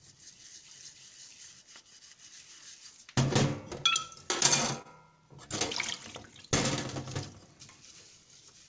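Everyday sounds passed through a WebRTC call path, with nothing above 8 kHz as G.722 allows. From 4.82 to 4.87 s there is a short stall from a late packet: the last sound is stretched by about 30 ms with a slight buzz or dip. Unlike a lost packet, nothing is skipped. Playback resumes where it stopped, just 30 ms later.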